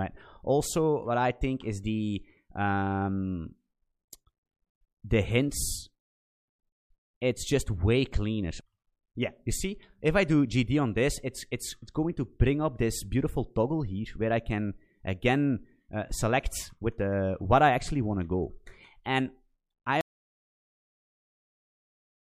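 An audio dropout to silence begins at 20.01 s and runs to the end of the clip. The sound cuts off mid-flow into silence, with no room tone, most likely because the input was lost while recording continued writing silence.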